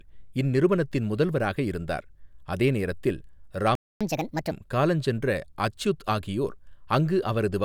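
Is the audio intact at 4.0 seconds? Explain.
No. At 4.0 s the sound sits at the very end of a playback stall, running from 3.75 to 4.01 s just after "முதல்வராக இருந்தார் அதே நேரத்தில்". For about 250 ms the output falls silent in mid-flow, likely because the player ran out of buffered data or its thread was held up. On a waveform this is a flat line cutting straight through the signal. On a spectrogram it is a clean vertical blank band across every frequency.

At 4.01 s catch-up at higher speed takes over and lasts until 4.51 s, ending just before "காலஞ்சென்ற அச்யுத் ஆகியோர்". The player resamples its backlog to run at 1.5 times normal speed, so the sound hurries and rises by about seven semitones, giving a brief chipmunk-like quality. A spectrogram shows the harmonics shifted upward and the syllable patterns squeezed closer together in time. The waveform shows compressed, denser cycles over that half second.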